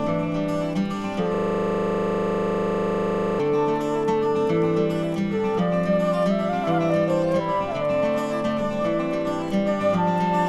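A system hang loop runs from 1.34 s to 3.40 s: the system stalled while the audio hardware kept replaying the same 40 ms buffer, so one fragment repeats about fifty times, giving a rough, stuttering buzz at 25 Hz.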